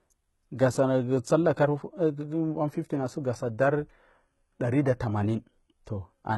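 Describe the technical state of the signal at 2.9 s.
At 2.9 s the speech carries HE-AAC compression damage, present across the whole clip: the treble, cut off above 11.8 kHz, is likely rebuilt by copying lower bands upward, so s sounds turn gritty and lispy. The heavy artefacts suggest a very low bitrate, around 16 kbps.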